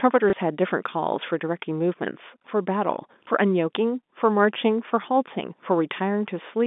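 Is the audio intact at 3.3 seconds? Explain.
No. Just before 3.3 seconds, from 3.24 to 3.27 s, there is a small blip. This is packet loss with the last packet repeated. About 30 ms of audio was lost, which fits a single lost 30 ms packet. The receiver replayed the previous packet to fill the gap. The telephone-band G.711 sound is heard around it.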